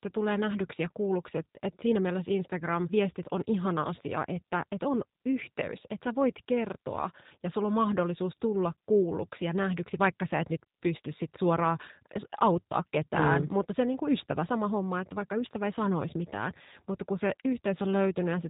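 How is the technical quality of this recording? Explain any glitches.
The recording has been through a low-bitrate speech codec, and that coding damage is plainly audible for its whole length.

Throughout, the sound carries G.729 codec artefacts. The codec models speech as a vocal tract filter plus pitch and sparse pulses, which fits an 8 kbit/s stream. Nothing above 3.8 kHz survives, so the speech sounds band-limited, rough and synthetic.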